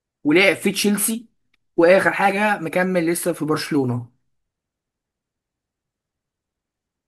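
No technical faults turn up anywhere in the recording, with the signal holding steady throughout.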